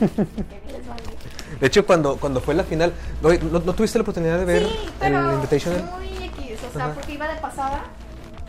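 No technical faults are audible anywhere in the audio.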